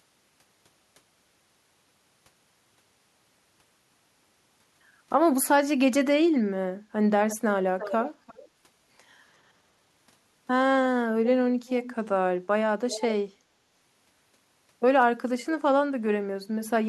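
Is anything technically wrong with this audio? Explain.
Yes, there's an echo leak in this speech clip. A delayed copy of the talker comes back about 346 ms late, in five short scraps: 7.29 to 7.37 s, 7.79 to 8.10 s, 8.27 to 8.49 s, 11.67 to 11.95 s and 12.90 to 13.05 s. It's quiet, roughly 10 to 25 dB under the main voice, loudest around 7.8 s. The likely cause is a far end on speakerphone whose echo canceller let some of its own loudspeaker output slip back into the microphone and return down the line.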